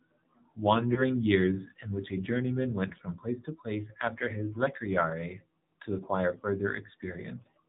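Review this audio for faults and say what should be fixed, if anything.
The AMR narrowband mobile codec shapes the speech throughout. Nothing passes above 4 kHz, and the vocal-tract model driven by sparse pulses gives the voice a plainly audible buzzy, synthetic edge, consistent with a low mode of roughly 7.4 kbps. To prevent it, carry the call over AMR-WB or a higher AMR-NB mode, or capture the audio before it enters the mobile network.

Lost AMR speech frames cause two brief dips or warbles, at 0.94 to 1.03 s and at 2.88 to 2.93 s. Each fits a single corrupted 20 ms frame. At each one the decoder repeats the last good pitch and vocal-tract settings at reduced gain until clean frames resume. To prevent it, improve radio link quality or record on a path that does not depend on the air interface.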